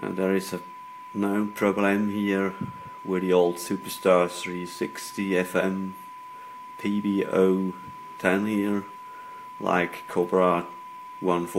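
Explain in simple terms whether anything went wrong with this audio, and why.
Nothing went wrong here; no faults can be heard anywhere.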